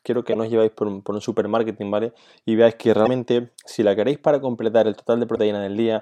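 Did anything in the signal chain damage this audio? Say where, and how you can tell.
Yes. Brief glitches break into the speech at 0.30–0.36 s, just before "no os lleváis por", at 3.02–3.08 s after "veáis que", and at 5.32–5.39 s after "la queréis para completar". These point to damaged data in a compressed stream at the codec stage. The decoder misreads corrupted frames, loses sync and skips ahead to the next frame header.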